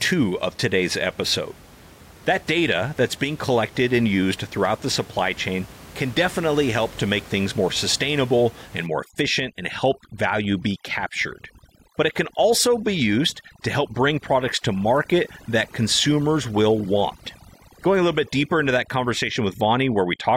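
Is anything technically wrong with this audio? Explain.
Yes. From 8.86 s, right after "things more sustainable and", to the end, there is overdone noise removal. An over-aggressive noise reducer shuts off any band close to its noise estimate. The room noise, about 22 dB below the speech, drops to near silence with twinkling specks, and quieter speech detail goes too. On a spectrogram the background turns black with isolated dots, and the speech harmonics break into ragged islands.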